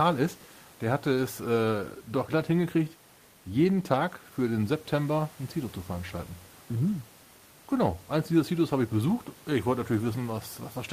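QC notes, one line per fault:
Nothing stood out on listening to this speech recording.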